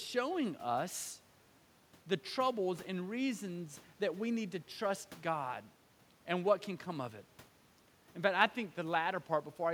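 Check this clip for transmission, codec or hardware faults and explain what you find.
Checking this clip turns up no faults to explain.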